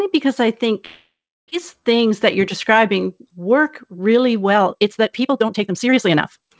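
From 0.86 to 1.54 s, right after "because I", the sound breaks off in what is likely a long network dropout. The last sound is drawn out as a fading buzz or hiss, then about a third of a second of silence follows, and roughly 0.6 s of audio never returns.

Between 2.10 and 2.88 s, just before "work really", a jitter buffer speed-up trims short pitch-period chunks, about 40 ms in total. Delivery runs roughly 4% faster at unchanged pitch.

From 4.48 s to the end of the clip, after "work really", the audio is likely a time-stretched section squeezed to 1.69 times normal speed. The pace jumps abruptly while the pitch holds, and dropped fragments make it rushed. Throughout, nothing is heard above 8 kHz, which fits a wideband call codec such as G.722.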